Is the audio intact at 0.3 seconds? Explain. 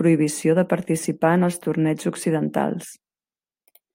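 Yes, at 0.3 seconds the audio is intact, with no fault present at that moment.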